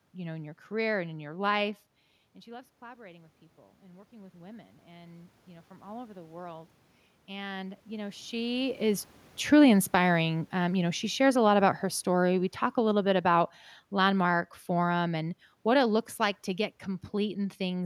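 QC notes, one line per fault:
2.46 to 6.77 s, automatic gain rising: After "in your life and", the voice and the room noise behind it swell together over about four seconds until "and you know". The level at the microphone dropped by about 19 dB when the talker moved around 1.5 s. The gain control then raised its gain by about 10 dB to compensate, so only part of the lost level comes back.
8.45 to 16.47 s, automatic gain falling: Just after "and you know", as the talker moves again near 8.5 s, the voice and the background sink together over roughly eight seconds. The gain control judged the input too loud, or its noise too strong for the gain it had reached, and pulled its gain back down by about 10 dB. This undoes the earlier boost.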